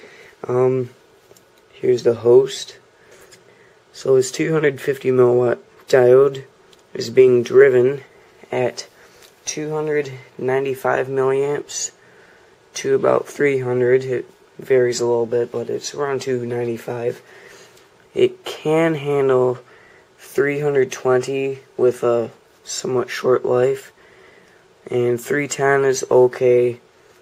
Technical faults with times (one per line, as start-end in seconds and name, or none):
none